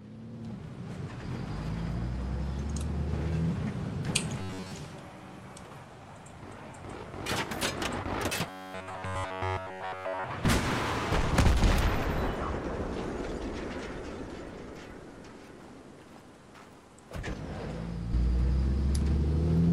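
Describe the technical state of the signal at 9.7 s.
At 9.7 s the sound is caught in robotic sound from repeated short buffers, running from 8.50 to 10.24 s: a rigid metallic buzz at 93.8 Hz throughout, likely from a roughly 10.7 ms chunk being looped while real audio is skipped. Unlike stuttering or dropouts, the buzz stays at a fixed rate.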